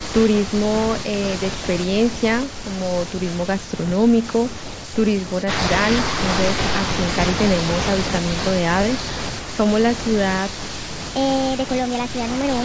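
From 11.00 s to the end at 12.64 s, a section at the wrong speed sets in, most likely because that stretch was played back against a mismatched clock. The speech runs 1.28 times too fast, so timing and pitch shift together: the voice jumps up by roughly four semitones and sounds hurried and thin compared with what came before. The call microphone processing's band limit, with nothing above 8 kHz, stays in place through the change.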